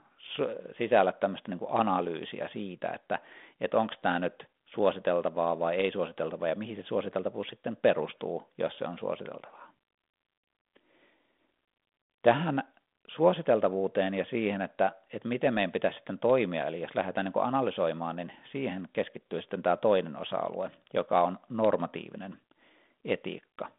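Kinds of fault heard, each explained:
No faults found; the speech stays within a telephone band with nothing above 3.8 kHz, as expected for a 32 kbit/s G.726 link.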